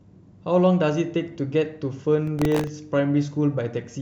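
From 2.27 to 2.67 s a gritty burst of crackle tears across the speech, then stops. This is processor overload crackle: the processor missed a run of deadlines for very short buffers, around a millisecond and a half each, and each miss replayed a hard-edged scrap of old audio.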